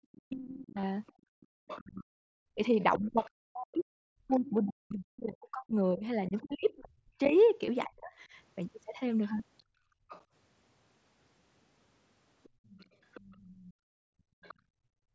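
From 0.0 to 8.12 s the speech is suppressed in double talk. The level repeatedly sinks, at its deepest by around 40 dB, for roughly 5 s in total. This is likely because the echo canceller could not separate the near talker from loudspeaker echo and attenuated both.

At 0.81–0.83 s, then at 7.66 s and 9.38 s, there is concealed Bluetooth headset packet loss. Each gap is bridged by repeating a closely matching stretch of the preceding waveform, which gives a brief buzzy fill and a slight warble at the rejoin. The first gap lasts 22.5 ms, which fits the loss of three 7.5 ms frames. The later two last 15 ms each, which fits two frames. The wideband headset link limits the audio to 8 kHz throughout.

The other side's voice leaks through at 1.07–4.5 s, 6.38–7.33 s, 9.24–10.23 s and 12.43–14.54 s. It is a second voice sitting well below the main speech, most prominent in the first stretch. The likely cause is loudspeaker playback that the echo canceller did not fully remove from the microphone.

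The background is gated by the echo canceller at 1.12–1.49 s (about 33 dB down), 9.63–10.09 s (about 21 dB) and 12.49–15.14 s (about 32 dB). The room sound drops out while the far end plays and returns when suppression releases.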